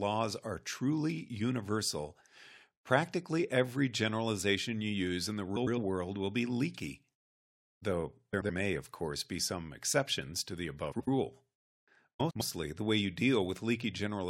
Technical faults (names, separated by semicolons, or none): frames out of order